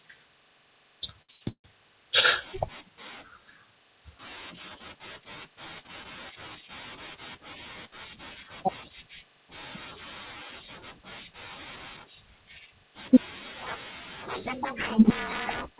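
At 1.22 s the speech catches on a short stall from a late packet. A packet arrived behind schedule and the jitter buffer ran dry. The receiver held the last sound for 66 ms, to 1.31 s, then carried on from the same point. Nothing is lost. One sound simply lasts too long, with a faint buzzy smear. The whole clip is narrowband, with nothing above 4 kHz, which fits a G.711 call path.

A call audio freeze follows directly, from 1.31 to 1.43 s. The held sound stretches a further 101 ms as a fading buzz with no silence. A second freeze runs from 1.49 to 1.66 s. It fills 152 ms, and the final 90 ms of that fall to silence. Both are likely packets held up in transit, so the receiver had nothing new to play. When the audio resumes it picks up where it stopped. The gaps push everything later but remove nothing.

From 7.87 to 8.91 s there is a gentle jitter buffer speed-up. The buffer held more audio than it wanted. 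The receiver trimmed short pitch-period slices to catch up, taking out a few tens of milliseconds. Playback runs at 103% with the pitch unchanged, so it is barely hurried. A much sharper speed-up hits from 15.66 to 15.77 s. It reaches 144%, cuts about fifty milliseconds, and sounds clearly rushed.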